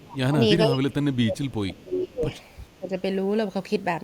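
Speech whose voice sinks sharply, by roughly 25 dB at worst, at 0.01–0.38 s, 0.66–2.28 s and, more lightly, 2.79–2.94 s. This is speech suppressed in double talk, likely an echo canceller ducking the talker while the far side spoke.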